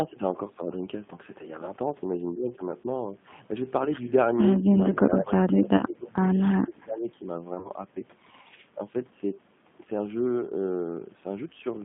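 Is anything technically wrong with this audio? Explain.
Yes. The whole clip has passed through the G.729 codec at 8 kbit/s, and the codec damage is plainly audible. The line band runs from about 150 Hz to 3.5 kHz. Speech is rebuilt from a vocal tract filter, a pitch predictor and sparse pulses, so it sounds rough and synthetic. A spectrogram shows nothing above 3.5 kHz.

VoIP packet loss concealed by the speech codec occurs at 3.85 to 3.89 s (10 ms lost), at 5.77 to 5.85 s (20 ms lost), and at 7.55 to 7.70 s, where 50 ms is lost scattered over 100 ms with a longest run of 30 ms. Each time, the decoder extrapolates its last pitch and filter at falling gain. This produces a buzzy, smeared stretch that then recovers. On a spectrogram these show as smoothed, repetitive harmonic patches.

Between 6.63 and 7.17 s, speech is suppressed in double talk. The speech dips by up to roughly 20 dB, over about half a second in all. 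The likely cause is an echo canceller that could not separate this talker from loudspeaker echo and turned both down. A waveform shows the envelope sagging or breaking into pieces there.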